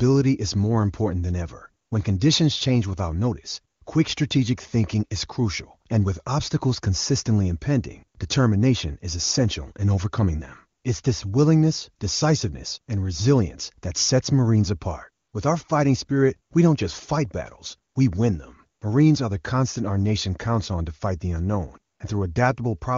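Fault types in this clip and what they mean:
AMR comfort noise: the phone judged short pauses in the speech as silence and stopped sending speech frames. The receiver then filled each pause with steady synthetic noise in place of the real background. This happens in 20 to 80 ms gaps at 1.85, 3.75, 10.79, 15.25, 17.91, 18.79 and 21.93 s.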